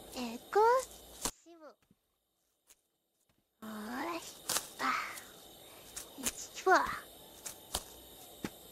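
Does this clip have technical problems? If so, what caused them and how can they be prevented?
Yes. From 1.30 to 3.62 s the sound falls by about 27 dB, likely from one channel inverted cancelling shared content in mono; unlike a dropout, a thin residue remains. Checking each channel's polarity before mono summing prevents this.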